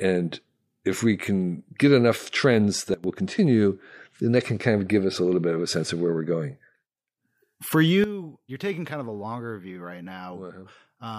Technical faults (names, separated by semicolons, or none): sudden gain jump